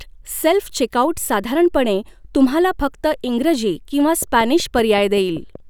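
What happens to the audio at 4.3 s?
A train of clicks runs from 4.22 to 5.56 s, starting just after "तुम्हाला फक्त इंग्रजी किंवा". Around seven evenly spaced, similar pulses arrive at 5.3 per second, peaking about 5 dB above the speech and heard as steady ticking, likely from electrical interference or a faulty connection or power supply.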